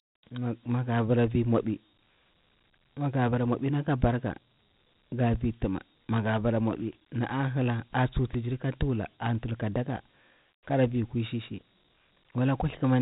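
Throughout the speech, Dialogic VOX ADPCM coding is plainly audible. This 4-bit OKI scheme, which fits 32 kbps at 8,000 samples a second, leaves nothing above 3.8 kHz. Its coarse step-size tracking adds a gritty hiss that follows the speech.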